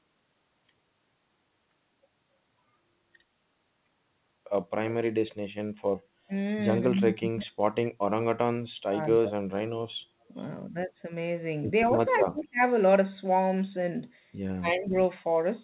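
Speech suppressed in double talk at 6.85 to 7.57 s and 8.74 to 9.43 s: the voice drops by up to about 35 dB for around 0.7 s each time. The likely cause is an echo canceller that cannot separate the near talker from far-end loudspeaker echo while both speak, and so turns everything down.

Echo leak at 12.09 to 12.21 s: a faint delayed copy of the voice, about 25 dB below it and trailing by 197 ms, slips through briefly, likely because the loudspeaker side's echo canceller failed to remove all of its microphone pickup.

Speech suppressed in double talk again at 12.23 to 12.6 s and 14.57 to 14.94 s: shorter dips of roughly 0.4 s, reaching about 35 dB and then about 30 dB, again likely the same overlap-driven gating. Throughout, the narrowband call path leaves nothing above 4 kHz.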